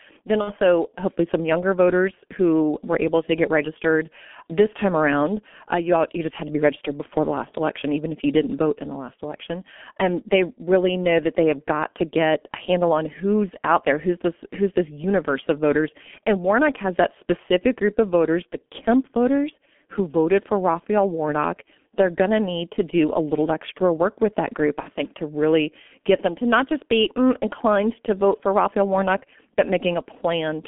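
Throughout, the speech runs through the G.723.1 codec at a very low rate, which fits about 6.3 kbit/s, inside a 200 Hz to 3.4 kHz line band. Its slowly updated voice model and coarse frames leave the sound heavily muffled and hoarse, with smeared consonants.

From 0.41 to 0.57 s, just before "hopefully some younger voters", and again from 24.80 to 24.90 s, between "work with that group" and "think to really get", VoIP packet loss concealed by the speech codec takes out about 60 ms of audio, which fits two lost 30 ms frames. The decoder fills the gap by extending its last pitch and filter while lowering the gain, so the speech stretches into a short buzzy tone or coloured noise that fades, and comes back weak for a moment.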